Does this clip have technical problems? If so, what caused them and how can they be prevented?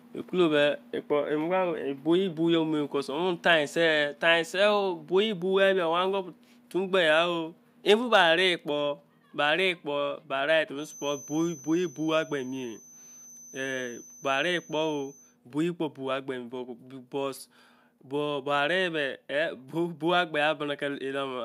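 Yes. At 1.02 s the speech and the background both drop abruptly in level, by about 2 dB, in a single step rather than a fade. This microphone volume step-down is likely the call software's automatic gain control deciding the input was running hot and lowering the device's input volume all at once. To prevent it, set the microphone level moderately from the start and disable automatic input adjustment so the software never needs to correct it mid-call.

From 7.90 to 8.21 s the loudest syllables take on a harsh, crackly edge. This is microphone overload: the peaks run about 3 dB past the converter's maximum, so their tops are flattened, affecting only a small fraction of samples but enough to add grit. The likely cause is an input volume set too high for the loudest moments. To prevent it, lower the input gain so peaks stay well below full scale.

From 10.73 to 15.38 s a thin, steady whistle at about 6.1 kHz sits behind the speech, roughly 20 dB below it and swelling and fading slowly in level. 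This feedback whistle likely comes from sound leaking from the loudspeaker back into the microphone, with the loop hovering just at the edge of feedback so one frequency rings on without building up. To prevent it, use headphones or move the microphone farther from the loudspeaker and turn the playback volume down.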